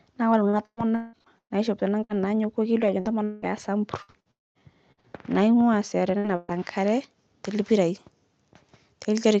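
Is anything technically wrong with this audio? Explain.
Yes. From 0.49 s, after "naa kore", to 6.54 s, just before "nkare te lpirai", there is repeated packet loss (robotic sound). Thirteen gaps, the longest 180 ms, were each patched by stretching the preceding sound. That gives choppy speech with pieces missing. On a spectrogram this shows up as recurring smeared, frozen bands, about 18% of the span.

From 4.31 to 4.58 s there is a long network dropout, likely a stretch where no audio arrived. A brief continuation of the last sound fades into about 210 ms of silence, visible as a flat waveform gap and a blank spectrogram column below the 8 kHz call-codec ceiling.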